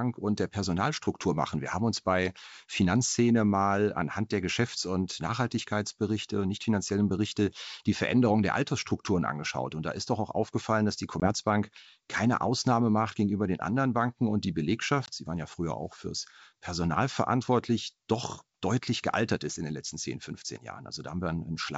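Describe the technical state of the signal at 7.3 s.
At 7.3 s the speech is intact, passing through G.722 wideband telephone coding at 64 kbit/s with no fault affecting the signal at that moment.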